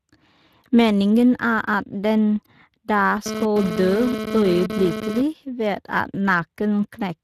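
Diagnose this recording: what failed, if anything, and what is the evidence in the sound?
Speex codec, throughout the clip: this is a codec-stage fault. The speech has a plainly audible grainy, hoarse texture because the CELP coder has too few bits to model the excitation well, at about 22 kbps. Content stops at 15.3 kHz, pointing to Speex's widest band mode. The highs above 8 kHz sound like shaped noise rather than real detail, which is how Speex fills that band at this setting.

GSM phone buzz, from 3.26 to 5.22 s, starting right after "er at den da": this is interference in the analogue wiring. A hard, raspy buzz at about 217 Hz, rich in harmonics and unrelated to the speech, sits only about 6 dB below the signal. A nearby 2G phone was transmitting in bursts, and a circuit in the audio path rectified the radio pulses into audible sound. The buzz comes and goes, which points to a data transfer rather than a call.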